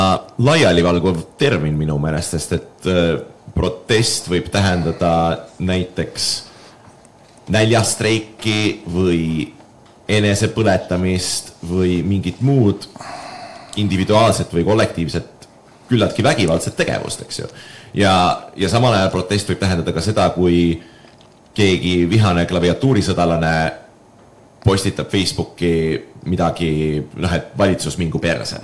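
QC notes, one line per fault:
No faults detected.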